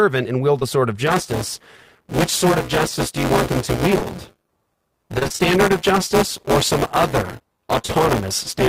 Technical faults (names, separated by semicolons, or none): short concealed packet loss; buffer tearing; repeated packet loss (robotic sound)